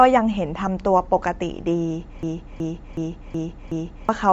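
Throughout, the speech sounds breathy and grainy with nothing above 7.7 kHz, likely Bluetooth LC3 compression; a spectrogram shows a flat, noise-speckled ceiling. From 2.23 to 4.09 s, a system hang loop repeats one 371.5 ms slice five times, a 2.69 Hz stutter. The waveform shows identical blocks, and about two seconds of sound are lost.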